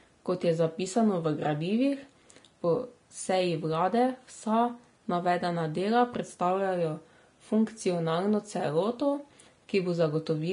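Vorbis compression runs throughout: nothing reaches above 10.6 kHz, and the treble sounds hissy and grainy, with roughened tones, which fits a low bitrate of roughly 33 kbps. The likely cause is a Vorbis encoder quantising fine detail so coarsely it turned to noise.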